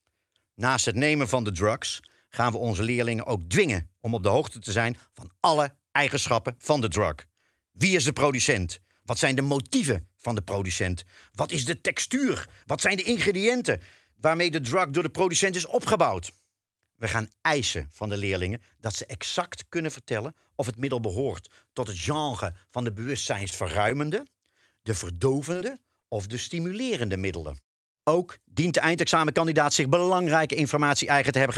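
At 23.49 to 23.54 s there is a short stall from a late packet. The jitter buffer ran dry, so the receiver held the last sound for 22 ms and then resumed at the same point. Nothing is lost, but the speech lands 22 ms later from then on, a drag rather than a gap.

At 25.53 to 25.57 s a short concealed packet loss replaces 20 ms of speech with 17 ms of synthesized continuation. The same fault recurs at 26.01 to 26.18 s, with 20 ms missing and 20 ms filled, adding about 10 ms. Unlike the stall, real audio is gone here, so each spot is heard as a brief smear or wobble.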